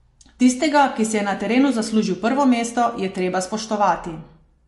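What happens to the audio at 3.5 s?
At 3.5 s the speech carries the same damage heard across the whole recording: a hard ceiling on the treble with nothing above 11.3 kHz, and a watery, swirling texture on the sibilants. That points to MP3 compression, likely at a low rate around 48 kbps, where the encoder drops the top band and lets weak frequency lines flicker on and off between frames. A spectrogram shows a flat cut-off at 11.3 kHz and patchy, blinking upper content.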